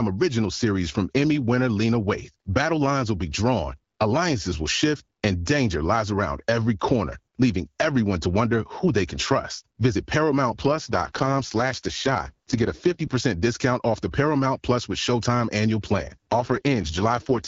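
This is speech carried over an AMR-WB (HD Voice) link, with light codec coloring throughout. Two AMR rate drops occur, from 10.48 to 13.16 s and from 15.97 s to the end. The band stays intact, with no gaps. But the voice turns rough and raspy, which fits a switch from 12.65 to 6.6 kbit/s.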